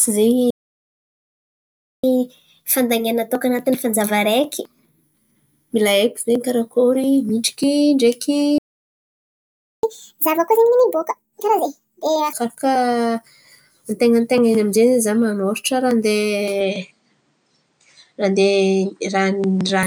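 At 0.50 s the speech cuts out and stays silent for about 1.53 s, until 2.04 s. This is a playback stall: the player was likely starved of data or its thread was blocked, so output halted mid-flow. From 2.04 s to 5.04 s the catch-up at higher speed follows. The backlog is played 1.1 times faster, which lifts the pitch by roughly a semitone and a half. The speech sounds slightly hurried and bright until it settles back to normal rate.

A second playback stall begins at 8.58 s, right after "karakôry midriky ndreky", silencing the output for about 1.25 s until 9.83 s, again likely from an underrun or blocked playback thread. The catch-up from 9.83 s to 12.33 s is far more aggressive, at 1.5 times speed. That raises the pitch by roughly seven semitones, close to a fifth, so the speech turns audibly chipmunk-like and rushed before dropping back to normal.

At 16.61 s the tone changes abruptly and stays changed to 19.83 s. 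The input was likely switched to a poorer device. There is no gap at the switch and no jump in loudness, but the band narrows, so the top air and sibilant sparkle disappear and the sound goes duller. A new noise floor also appears, sitting about 50 dB below the speech.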